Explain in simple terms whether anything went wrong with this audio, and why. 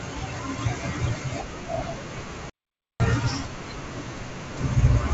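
Two things went wrong. From 2.11 to 2.21 s, bit errors on an ADPCM link cause rough pops and brief jumps in loudness, because a few flipped bits confuse the decoder. The sound is damaged but never goes quiet. From 2.50 to 3.00 s comes a playback stall, half a second of clean silence, likely because the player ran short of data. It has no crackle, and the speech then resumes.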